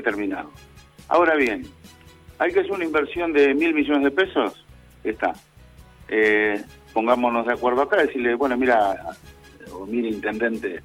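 There's one glitch in this audio, right near the start at about 1.13 s: a very short chirp or blip, over in roughly a hundredth of a second. That's damaged data in a compressed stream. A bit of the encoded data there got corrupted, so the decoder misread the frame, lost its place and had to hunt for the next valid frame header before it could carry on, and that brief garbled output is what you hear.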